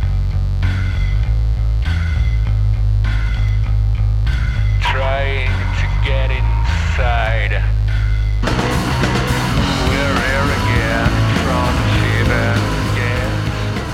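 A mains buzz runs under the whole clip, from start to finish. It is a steady, raspy drone locked to 50 Hz mains. Something like a dimmer, a rectifier or a missing shield has let sharp switching spikes into the signal path, two in each mains cycle. Those spikes carry a dense stack of harmonics, reaching well up into the kilohertz range. The buzz sits roughly 20 dB below the sound and never lets up.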